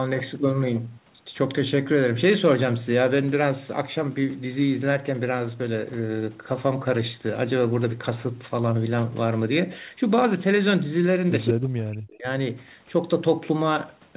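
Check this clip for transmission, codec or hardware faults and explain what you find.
Two faults occur close together near the end, both within the narrowband call audio, which has nothing above 4 kHz, consistent with a G.711 path.

From 11.46 to 11.51 s, an echo leak: a brief delayed copy of the speech, about 173 ms late and only slightly quieter, likely residual loudspeaker pickup the echo canceller missed.

From 11.52 to 12.26 s, speech suppressed in double talk: the talker's level dips, at worst by roughly 40 dB, likely as the canceller turns down both the talker and the loudspeaker echo during overlap.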